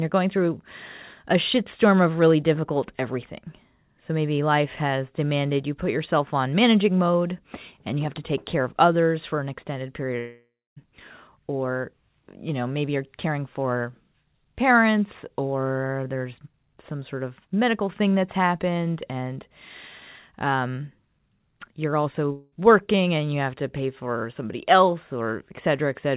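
At 10.19 s the sound smears into a fading buzz, then goes quiet for about 0.25 s before resuming at 10.78 s. Around 0.58 s is lost, likely a long network dropout. A shorter one at 22.32 to 22.54 s drops about 0.2 s and fades without reaching silence. Both play through the call path's narrowband sound, with nothing above 4 kHz.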